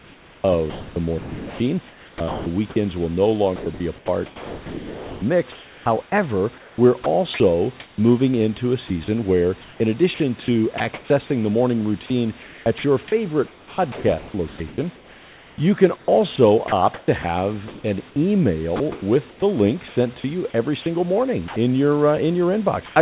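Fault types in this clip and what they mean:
Sound chopped by the voice detector: speech keeps flickering between real sound and synthetic hiss over five stretches, likely the sender's detector toggling transmission on and off.
Sound dropped by the voice detector: at 22.86 s, about 0.1 s of speech becomes steady noise, likely because the detector mistook it for background.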